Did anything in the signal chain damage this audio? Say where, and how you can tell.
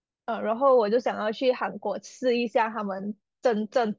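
No, nothing in the signal chain stood out as having damaged this speech on listening.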